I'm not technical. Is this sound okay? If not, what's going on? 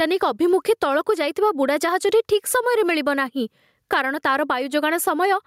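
No. Gain pumping runs through the whole clip. The recording level was likely set far too high, with an automatic level control clamping down hard on each loud moment. The swing is large, and it flattens the difference between loud and soft, leaving the speech sounding squashed.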